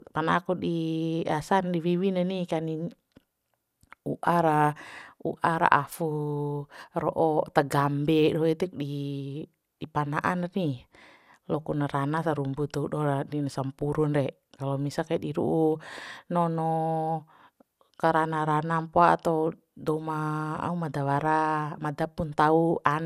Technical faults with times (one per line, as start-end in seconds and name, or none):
0.00-23.05 generation loss